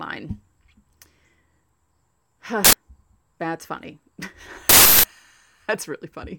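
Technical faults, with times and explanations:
2.65 to 2.73 s and 4.69 to 5.04 s, uninitialised buffer: twice the playback side sent out a block of memory before any audio had been written into it, so whatever leftover data sat there was played as samples. Each time the speech is replaced by a harsh, loud crack or burst of digital noise. The first lasts about 85 ms, fitting a 4096-sample block. The second runs about 341 ms, which points to a 16384-sample block.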